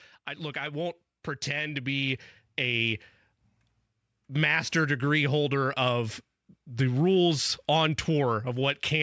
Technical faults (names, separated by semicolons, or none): automatic gain rising